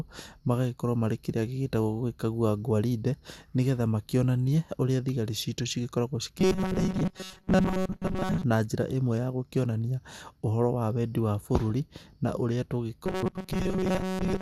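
Robotic sound from repeated short buffers runs from 6.40 to 8.43 s, just after "ũrĩa thigari citũ cigĩkoragwo", and again from 13.05 s to the end. The speech becomes a rigid metallic buzz at 188 Hz for most of each stretch, likely from a roughly 5.3 ms buffer being replayed while fresh audio arrives too seldom.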